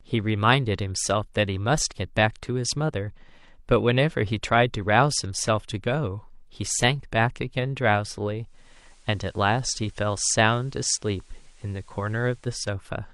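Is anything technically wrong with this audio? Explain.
Yes. From 8.41 to 12.73 s, digital radio blending to analogue: the receiver lost its digital stream and cross-faded over about 0.39 s to the station's FM signal. Faint hiss appears, and level dips about 1 dB. The added hiss distinguishes it from a simple codec bandwidth drop.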